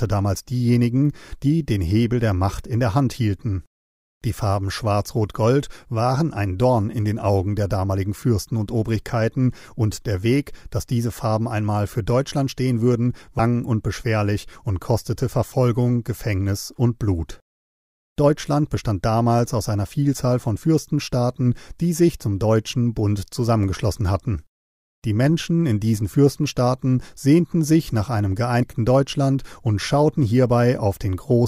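Speech, with damaged data in the compressed stream at two points: corrupted bytes make the decoder misread the frames there and lose sync until it finds the next frame header, which comes through as a brief chirp or blip at 13.39 s and 28.62 s.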